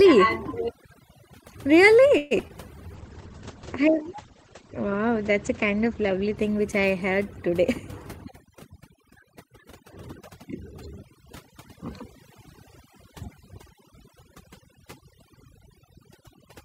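A noise reduction stage set far too aggressively runs through the whole speech clip: it strips out frequency bands near its noise estimate, leaving near-silent, twinkling gaps. From 2.17 to 2.51 s, repeated packet loss leaves three holes, the longest 134 ms. About 157 ms is patched by extending earlier sound and about 60 ms is simply lost, so this stretch turns choppy and robotic. Between 2.88 and 4.04 s, a jitter buffer slow-down repeats pitch periods to build a reserve, adding 44 ms and running at 97% speed, so syllables drag slightly at unchanged pitch. Overlapping this, a call bitrate drop from 2.96 to 8.69 s cuts the encoder from 64 to 12 kbps and the bandwidth from 20 kHz to 8 kHz. It stays at the lowest rate for 2.9 s, and the speech sounds muffled and coarse. A jitter buffer speed-up then trims pitch periods to shed excess delay, from 8.30 to 10.77 s at 103% speed, removing around 70 ms, and again from 13.74 to 16.42 s at 102%, removing around 50 ms. 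Both stretches run slightly faster at the same pitch.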